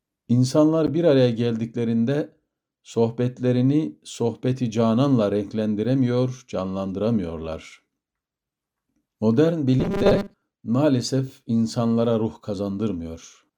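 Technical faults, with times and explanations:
0.87 to 0.89 s: corrupt frame decoded. A short chirp-like burst cuts across the sound. Damaged bits in a couple of compressed frames were played anyway. Misread gains and codes put energy at the wrong frequencies for roughly the length of those frames.
9.80 to 10.42 s: robotic sound from repeated short buffers. The sound turns into a rigid, metallic buzz at 200 Hz. This is likely from new audio arriving too slowly, with a 5 ms piece repeated to fill the gap. Most of this stretch is repeats, and the real audio is skipped.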